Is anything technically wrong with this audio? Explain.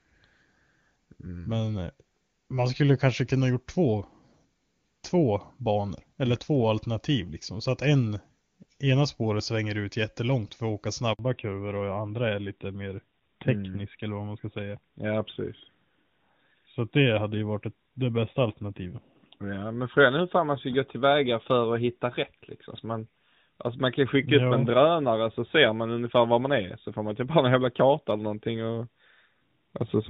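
Yes, two related faults, both around 11.1 s.

Handover gap, 11.13 to 11.19 s: the call was passed between networks and no speech frames came through during the switch. The sound fades out quickly and leaves a 60 ms hole, and whatever was said in that moment is gone.

Fallback to narrowband, from 11.19 s to the end: after the handover the call dropped out of HD Voice, which points to a step down from wideband AMR at its top rate to narrowband AMR. Nothing above 4 kHz survives, so the speech turns duller and rougher.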